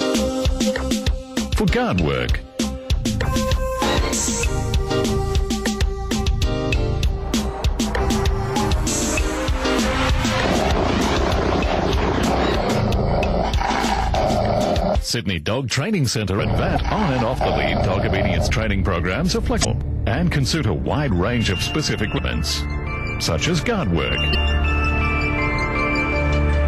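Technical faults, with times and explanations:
5.63–5.68, 16.73–16.78, 19.61–19.65, 22.14–22.18 and 24.31–24.35 s, damaged data in a compressed stream: Each is a brief chirp, squawk, click or short hole lasting about 40 ms. Corrupted bytes make the decoder misread frames. It loses sync and hunts for the next valid frame header.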